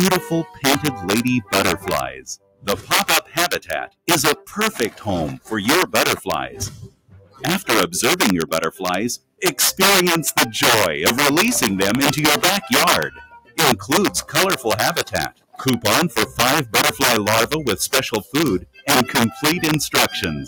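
From the start, integer overflow affects every loud moment. The signal was driven about 10 dB past full scale, and instead of being limited, a small share of the peaks wrapped around to the opposite extreme. Each wrap is a harsh, violent crack, far sharper than ordinary clipping. On a waveform, the tops of loud passages jump abruptly from one rail to the other. On a spectrogram, the cracks show as thin vertical lines reaching the top of the frequency range.

Also present throughout is a noise suppressor applied to music or sounds. A suppressor designed for speech treats sustained and ambient content as noise, so its gain swings by around 10 dB. Onsets pass through while held portions and tails are pulled down, and the result pumps and thins. On a waveform, the envelope sags soon after each attack. On a spectrogram, sustained energy and reverberant tails fade early and unevenly, leaving patchy gaps behind each onset.

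In seven places the sound is cut by the noise suppressor more deeply. At 0.44 to 0.64 s it drops by about 12 dB. The longest stretch runs from 1.42 to 5.52 s, intermittently reaching about 21 dB. Further dips of about 21 dB come at 6.48 to 7.44 s and 8.72 to 9.42 s. Drops of about 18 dB occur at 13.09 to 13.58 s, about 20 dB at 15.05 to 15.6 s, and about 18 dB at 18.23 to 18.88 s. In each, steady or decaying material sinks and its decay is truncated. These show as hollowed-out sections on the waveform and darkened, cleared regions on the spectrogram.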